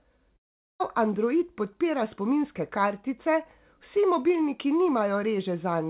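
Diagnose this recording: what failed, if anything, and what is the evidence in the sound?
Long network dropout, 0.36 to 0.82 s, at the network stage. The speech breaks off, the last sound is stretched into a brief fading buzz, and then roughly 0.41 s of near silence follows before the audio resumes with "android podpira spominske kartice", with the lost section simply absent. The likely cause is packets that never reached the receiver. Its concealment could only smear the final sound before giving up, over band-limited G.711 mu-law audio with nothing above 4 kHz.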